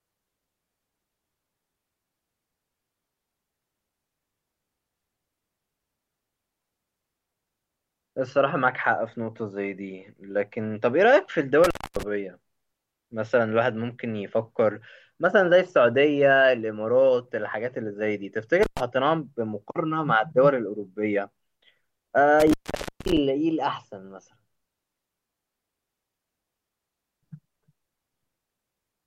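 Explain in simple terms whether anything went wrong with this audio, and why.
An intermittent contact, a loose cable or plug briefly disconnecting, cuts the speech out with crackles at 11.64 to 12.03, 18.63 to 18.80, and 22.40 to 23.17 seconds.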